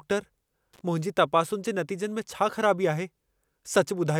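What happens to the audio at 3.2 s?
At 3.2 s the speech plays through intact, with no dropout, click, distortion or other fault at that moment.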